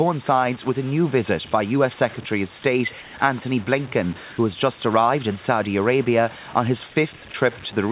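Right from the start and all the way through, the speech has a grainy, gritty edge that rides along with it and gets worse as it gets quieter. That's low bit depth without dither. It sounds like the samples were truncated to something like 6 bits, so the rounding error follows the signal instead of sitting as a steady hiss. That error lands roughly 20 dB under the speech, and the soft tails get rough and steppy.

Around 3.02 s there's a short patch, about 120 ms long until 3.14 s, where the room's real background drops out and a flat, featureless hiss takes its place. It's about 3 dB quieter than what surrounds it. That's likely comfort noise in place of the background. During a pause the sender stopped transmitting, and the receiver filled the gap with synthetic noise loosely matched to the background, which here sits about 22 dB below the loud parts. The bandwidth stops at 4 kHz, which is just how the phone-style codec on this call path works.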